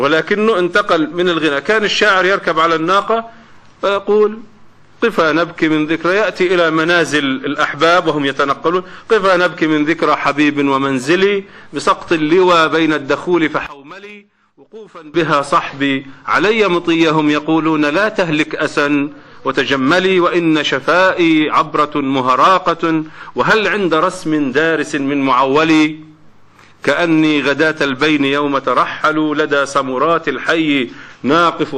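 One channel inverted is the likely cause of the dropout from 13.67 to 15.14 s, where the sound falls by about 21 dB and nearly vanishes, background included. With one side's polarity reversed, the shared content cancels in the mono sum, leaving only the residue where the channels differ.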